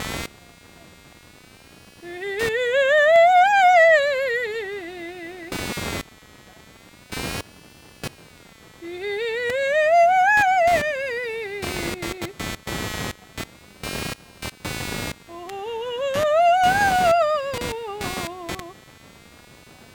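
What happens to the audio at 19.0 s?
At 19.0 s a buzzing, chirping layer sits under the music, pulsing at something like 200 times a second and only about 15 dB below the music itself. It is computer activity noise, and it runs through the whole clip rather than just this moment. Shifting load on the processor, graphics card or mouse disturbs the ground the audio circuit shares with the computer, so the interference follows the machine's activity rather than the music.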